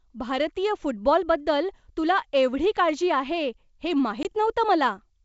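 A speech clip on a G.722 wideband call, whose coding sounds consistent with 64 kbit/s operation and leaves at most faint traces, has one fault: packet loss on an ADPCM call from 4.23 to 4.26 s. About 20 ms of audio, likely a couple of packets, drops out as hard-edged silence. A waveform shows a flat gap with abrupt edges, and a spectrogram shows a clean vertical blank band. Because the decoder's predictor and step size no longer track the sender's, the returning speech comes back slightly distorted before settling over the next few tens of milliseconds.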